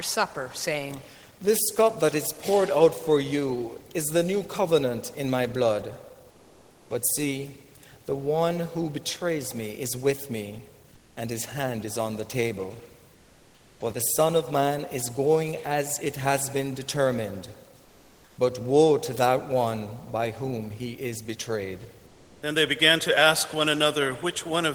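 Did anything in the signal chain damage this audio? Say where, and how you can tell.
Yes. Comfort noise replaces the background in five pauses, at 6.30–6.90, 10.94–11.16, 13.14–13.80, 17.84–18.37 and 22.06–22.42 s. This points to the codec stage, likely Opus discontinuous transmission. In each gap the real room tone, sitting about 33 dB under the loudest sound, turns into steady, detail-free synthetic hiss. At 10.94, 13.14 and 17.84 s it is also about 1 to 2 dB quieter, until the signal resumes and the true background returns.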